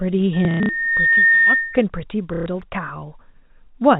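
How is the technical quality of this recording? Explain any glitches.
The recording has two clear glitches: a feedback squeal and two bursts of packet loss.

Loudspeaker feedback squeal, 0.33 to 1.84 s: the microphone re-captured its own loudspeaker, and a 1.8 kHz tone swelled over about a second to roughly 10 dB above the speech.

Packet loss with last packet repeated, 0.45 to 0.69 s and 2.34 to 2.46 s: the receiver replayed the last packet to cover gaps, producing buzzy robotic stutters. The first burst lost 180 ms scattered across 240 ms, with the longest run 90 ms. The second lost 120 ms. The spacing fits 30 ms packets.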